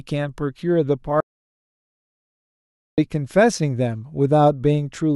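Speech, with an audio dropout to silence from 1.20 to 2.98 s: about 1.77 s of sound vanishes completely, no room tone, showing as a flat waveform and blank spectrogram, likely from a lost input link.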